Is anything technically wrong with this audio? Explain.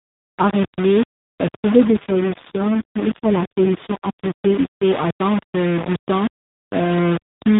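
Yes. There are two faults in this speech clip, heard through a narrowband mobile link that itself sounds like an AMR-NB call, band-limited to 4 kHz with light coding damage.

Low bit depth without dither, throughout: a coarse, grainy distortion rides on the speech for the whole clip and changes with it. The error sits roughly 10 dB below the signal. Quiet stretches turn gritty or sputter between a couple of levels. The likely cause is samples rounded to very few steps with no dither, consistent with a 4-bit quantiser.

AMR rate drop, from 1.84 s to 4.84 s: the bandwidth is unchanged and there is no gap, but the speech turns buzzier and more synthetic, then recovers at 4.84 s. The coding quality points to the codec falling from 12.2 kbps to its 4.75 kbps mode. With fewer bits, the vocal-tract model is driven by a sparser pulse excitation, so the speech loses natural texture.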